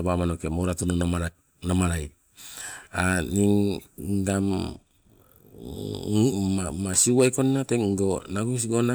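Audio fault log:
6.98 to 7.41 s, hard clipping. For a little under half a second the speech is driven about 4 dB past what the signal path can carry. Every peak above that ceiling is sliced off flat. Those squared-off tops create harmonics far above the speech, so the loud parts of this stretch take on a harsh, gritty crackle. The overload is modest, so the damage stays on the peaks and does not become a constant fuzz.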